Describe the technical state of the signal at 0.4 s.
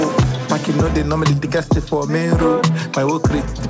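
At 0.4 s the signal is intact, with no dropout, click or distortion, only the band limit of the call path, whose content stops at 8 kHz as fits a G.722 wideband codec.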